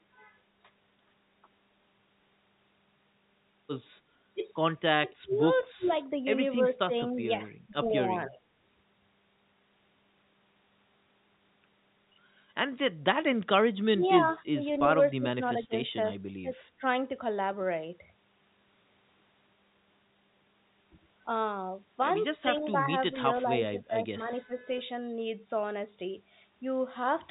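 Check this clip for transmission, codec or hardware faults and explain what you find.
Two faults recur in this speech: repeated dips from speech suppressed in double talk, and one short echo leak. The G.711 telephone coding adds only its usual 4 kHz band limit.

Speech suppressed in double talk occurs at 5.01–5.87, 6.04–6.37, 6.62–7.75, 8.06–8.40, 13.93–17.0, 22.42–24.09 and 24.28–24.81 s. The voice sinks, dulls or breaks into pieces, by as much as about 25 dB near 5 s and more gently elsewhere. The likely cause is an echo canceller that heard both sides at once, could not tell its own talker from loudspeaker echo, and turned everything down. A plain level drop on a weak connection would not behave this way. Here the damage is patchy, and it comes and goes in step with the other side's activity.

An echo leak appears at 5.82–5.93 s. A brief, faint copy of earlier sound, roughly 25 dB below the speech, arrives about 0.3 s (298 ms) late. 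This likely comes from a loudspeaker on one side of the call whose echo canceller let part of its microphone pickup slip back down the line. The double-talk dips take sound away. The leak does the opposite: it adds a delayed ghost on top of the voice.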